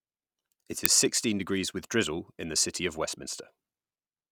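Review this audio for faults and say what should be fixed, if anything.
At 0.86 s, just before "is sixteen degrees with", an uninitialised buffer plays stale memory as a brief loud crack, unlike a dropout's silence; it fits a 32-sample buffer. Zero-fill or pre-write each buffer before it is handed to playback.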